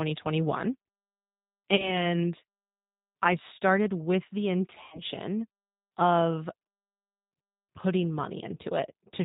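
From the start the speech carries the G.729 codec's sound: nothing above 4 kHz survives, and voices come out slightly rough and synthetic, as if rebuilt from a vocal-tract filter, a pitch predictor and a few pulses per frame. The damage is plainly audible, and the sound points to an 8 kbit/s G.729A stream. Unlike a generic low-bitrate music codec, the problem isn't swirly or smeared treble but a hard telephone band edge with a buzzy, model-built texture.

From 1.76 to 2.06 s, VoIP packet loss concealed by the speech codec appears: about 30 ms is missing, which fits a single lost packet. A second, heavier loss runs from 4.83 to 5.02 s, with about 90 ms gone, consistent with three packets. In each case the decoder stretches the last pitch and filter into a buzzy tone or coloured noise that fades instead of leaving silence, and the voice stays weak and distorted for a while after audio returns. 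That filled-in sound and slow recovery separate it from a plain dropout or a clipped gap.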